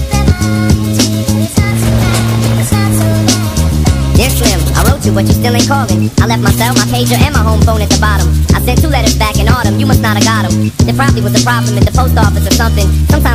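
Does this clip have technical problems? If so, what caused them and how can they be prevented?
Yes. Hard clipping runs through the whole clip: the signal is driven about 3 dB past what a stage can pass, so only the highest peaks, a small fraction of samples, are sliced flat, giving brief crackle on loud moments. Prevent it by lowering gain before conversion and leaving headroom.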